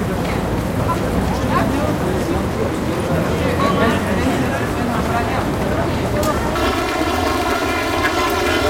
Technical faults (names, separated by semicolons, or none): planar audio read as interleaved